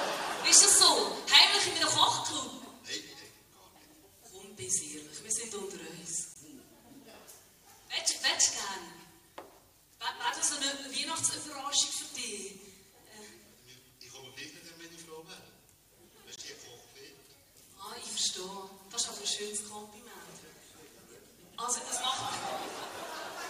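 The audio arrived in 10-second chunks, and silence was inserted at each join, a gap between chunks. Nothing is lost, but the sound stops abruptly for 20 ms at 6.34 s and again at 16.36 s, each a short hard-edged hole.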